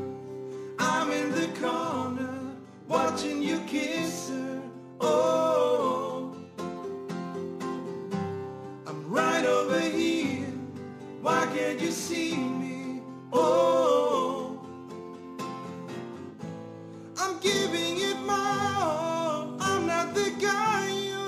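From start to finish the clip carries the gritty, inharmonic fizz of crude rate conversion, which points to a drop from 48 kHz to 44.1 kHz done by simply picking the nearest sample, with no filtering. The timing errors repeat in a fixed cycle, producing spurious tones roughly 25 dB below the sound that track its loud, bright moments. Unlike clipping, the grit does not wait for peaks. Unlike plain noise or quantisation hiss, it is pitched and made of shifted, inharmonic copies of the material.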